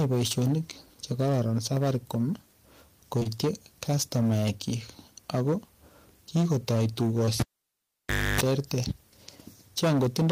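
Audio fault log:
throughout — hard clipping: The speech reaches a stage about 21 dB hotter than it can pass, so roughly a tenth of the samples are sheared off flat at the ceiling. Those squared tops add harmonics high up the spectrum. With overload this heavy, the result is a harsh, fuzzy distortion riding on every loud syllable, not an occasional crackle.
3.19–3.27 s — short concealed packet loss: Two back-to-back 20 ms packets never reached the decoder. The receiver invented about 17 ms and then 20 ms of audio by extending the preceding sound before fading back into real signal. The result is a brief smeared wobble lasting under a tenth of a second.
7.25–7.29 s — short concealed packet loss: One more 20 ms packet went missing and was filled with 20 ms of extrapolated sound, heard as a short smear.
7.40–8.41 s — cable pulled and plugged in: A live lead was yanked and reinserted. A pop opens a gap of nearly a second in which the signal almost disappears. 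For about 0.29 s of that gap, a 50 Hz mains buzz breaks through while only the plug tip makes contact. A second pop follows as the connection seats and the sound comes back at about 8.41 s.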